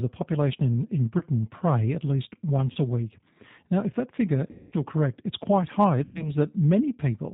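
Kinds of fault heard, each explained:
G.729 codec: Speech is rebuilt at 8 kbit/s from a filter and pulses. Nothing above 4 kHz survives. The voice sounds rough and synthetic.
VoIP packet loss concealed by the speech codec: The decoder guesses the missing sound, leaving buzzy or noisy, fading patches at 1.18, 2.72, 4.5 and 6.0 s.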